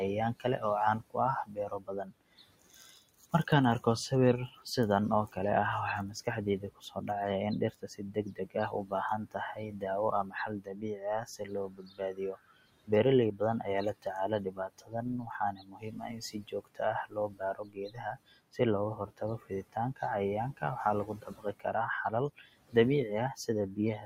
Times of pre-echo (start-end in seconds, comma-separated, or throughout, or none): none